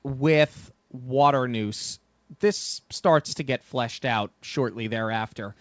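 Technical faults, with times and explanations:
No technical faults are present in this speech.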